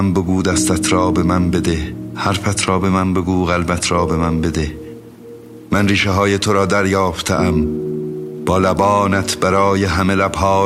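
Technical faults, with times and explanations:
No technical faults, with times and explanations, can be given, as none are heard.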